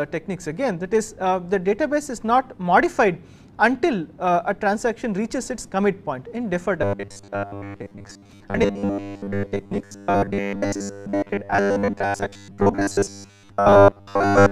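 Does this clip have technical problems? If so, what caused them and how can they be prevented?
Yes. From 6.82 s to the end at 14.51 s, the sound turns into a rigid, metallic buzz locked at 100 Hz that only loosely follows the original. This is robotic sound from repeated short buffers, likely caused by new audio arriving too seldom, so the playback repeats the last 10 ms chunk over and over for most of that stretch while the real audio is skipped. Providing enough processing headroom and a larger, steadier buffer prevents this.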